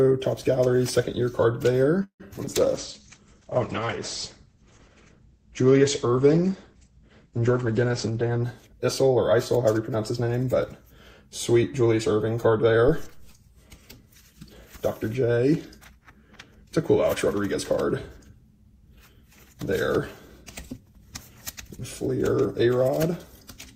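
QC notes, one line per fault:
2.03 to 2.49 s, repeated packet loss (robotic sound): four holes in under half a second, the longest about 163 ms. Each gets patched by stretching the last bit of sound, so roughly 42% of that stretch is filler and 60 ms just drops out. That's why it turns choppy.
2.46 to 8.47 s, call bitrate drop: the encoder got squeezed from 64 kbps down to 10 kbps and sat at the bottom for nearly 6 s. With so few bits it codes coarsely and the top end gets chopped at 8 kHz instead of 20 kHz, so things go muffled and watery until it climbs back.
7.93 to 9.75 s, jitter buffer speed-up: the receive buffer was holding more audio than it wanted, so it trimmed out tiny pitch-period slices over and over, roughly 150 ms in total. Playback runs about 8% fast with the pitch unchanged, which is why this bit feels hurried.
12.88 to 13.31 s, phantom power thump: a supply got switched on or off on a live input and the voltage step punched through the coupling capacitors. 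You get a deep low thud that dies away in about 96 ms.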